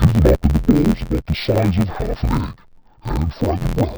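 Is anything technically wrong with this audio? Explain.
Yes. Throughout the speech, interleaved audio is read as planar: each 11.6 ms block, which fits a 512-sample block, gets split into halves, making it dull, robotic and buzzing near 86 Hz.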